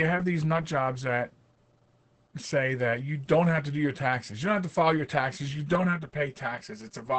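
From the start, the speech carries Opus voice compression damage. The band stops at about 8.7 kHz, the wideband limit of the SILK linear-prediction coder, and the coarse excitation coding makes the voice muffled, hoarse and slightly robotic. The damage is heavy, which fits a bitrate near 10 kbps. A plain low-pass filter would dull the top end but leave the voice smooth. The hoarse, robotic texture heard here comes from the codec itself.

At 5.75 s, channel delay (comb filtering) begins and lasts to the end of the clip. One channel arrives roughly 5 ms late, and when the two are summed to mono, cancellation carves evenly spaced notches starting near 100 Hz. The voice turns hollow and phasey on top of the codec roughness. This change differs from the codec damage because its fixed notches stay put. The codec's artefacts, by contrast, shift constantly with the sound.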